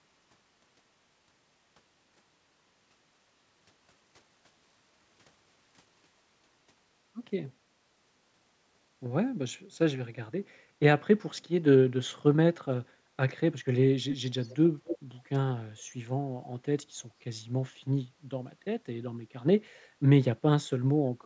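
Echo leak appears at 14.1–14.17 s, 14.42–14.57 s, 14.86–14.98 s and 16.42–16.46 s. Each is a brief copy of the speech arriving about 243 ms late. The first and third are fairly strong, the others faint. A loudspeaker's echo canceller likely let through what its microphone picked up.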